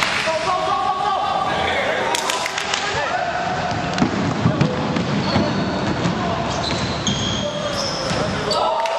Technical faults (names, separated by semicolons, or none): digital radio blending to analogue